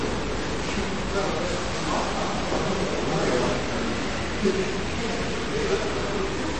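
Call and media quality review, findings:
Distortion across the whole clip, riding on the signal and hissing in quiet gaps. Likely a stuck bit in the converter or data path: one bit pinned, so values jump by its weight. Unlike clipping, it persists at low levels.

Watery, swirly texture throughout, smeared attacks, treble gone above about 8.3 kHz. Likely MP3 compression at a low rate, consistent with roughly 32 kbps: weak frequency lines switching on and off between frames. Unlike a plain low-pass, the texture warbles.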